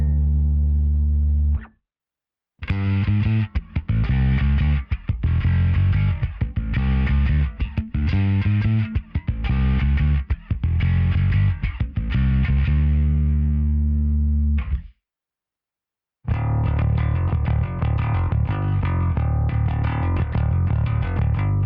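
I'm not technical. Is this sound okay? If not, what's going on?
No. For the first 2 seconds the sound is dull and smeary, then it suddenly turns clear with no gap. This is an adaptive stream starting at a low bitrate; unlike a dropout, nothing goes silent.

At 7.78 s there is a single low thump, a DC step. The audio's baseline jumps and then settles back. Unlike a crackle or dropout, the sound itself carries on untouched.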